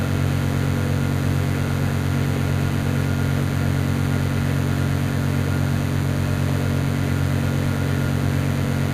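DECT cordless phone buzz runs throughout this recording of sounds: a nearby DECT handset or base station bursts every 10 ms, and the rectified pulses produce a 100 Hz buzz with harmonics, roughly 15 dB below the sound.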